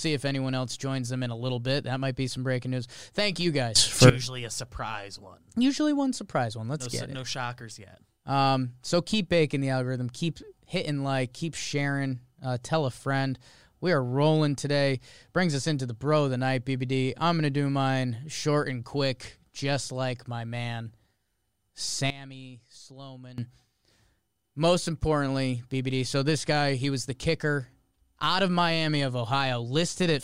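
A sudden gain jump arrives at 3.76 s, where the speech and its background noise leap up together by about 17 dB until 4.10 s. A second runs from 22.10 s to 23.38 s, this time dropping both by about 17 dB. Each change lands between adjacent samples with no fade, so the level steps rather than slides, likely from a gain setting applied instantly without a ramp.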